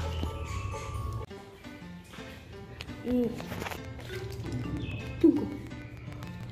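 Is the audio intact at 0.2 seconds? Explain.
Yes, the audio is intact at 0.2 seconds, with no audible dropout, click, distortion or other fault at that moment.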